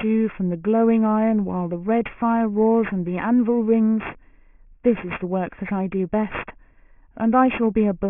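A speech clip with aliasing throughout: sibilants turn gritty and metallic, and the spectrum runs hard up to about 3 kHz, with false tones roughly 20 dB below the speech. The fold at 3 kHz points to resampling to about 6 kHz without a low-pass filter, which mirrors higher content back down.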